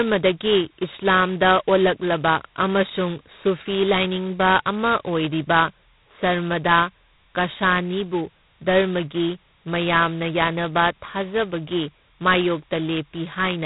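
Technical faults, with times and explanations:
Throughout: G.726 ADPCM. Nothing above about 3.9 kHz passes, and the speech carries a heavy, rasping hiss that rises and falls with its level, which fits the 16 kbit/s mode. Each sample is sent as a coarsely quantised difference from an adaptive prediction, so the error grows on loud passages and shrinks in pauses. A steady background hiss would stay constant instead, and a transform codec would sound swirly or watery rather than grainy.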